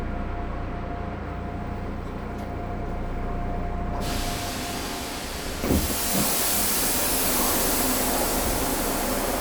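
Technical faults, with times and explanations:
No technical faults are audible; the everyday sound shows no audible disturbance to its level, timing or frequency content.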